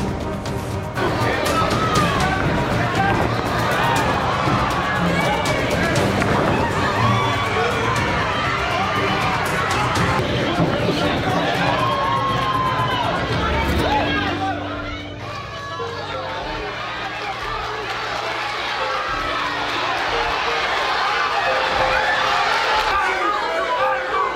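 Nothing here gives any trouble; there's no fault to point to anywhere in this audio.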